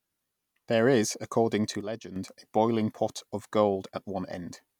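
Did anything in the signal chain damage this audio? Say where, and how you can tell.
Yes: a sudden gain jump from 1.81 to 2.16 s drops speech and background noise together by about 8 dB, likely an unramped digital gain change in the driver.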